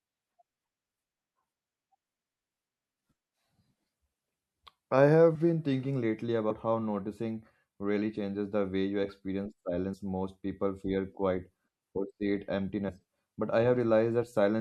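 The speech skips compressed frames at 5.34, 6.49, 9.93, 12.88 and 14.22 s. Each skips roughly 50 ms of audio, 100 ms at 6.49 s and 20 ms at 14.22 s, consistent with 24 ms frames. At each join the audio jumps ahead by the length of the frames left out.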